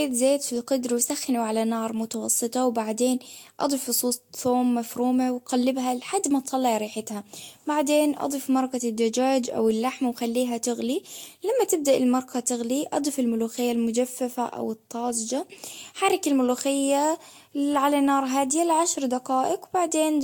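Repeated lossy coding is the likely cause here: the speech appears to have been decoded and re-encoded about five times, with a character that points to Vorbis at around 74 kbit/s. Each pass quantised the signal again on a shifted frame grid, so the losses stacked into generation loss across the whole clip. The result is a swirly, hollow, smeared tone with blurred consonant attacks, more degraded than a single pass at that rate would sound, and nothing is left above 19.2 kHz.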